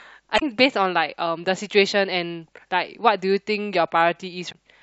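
Damaged data in a compressed stream appears at 0.35 to 0.42 s and again at 4.48 to 4.55 s, each lasting about 70 ms. In both spots the encoded bytes carrying the speech are corrupted, so the decoder misreads the affected frames, loses its place in the stream and has to hunt for the next valid frame header. The result is a brief glitch in the speech.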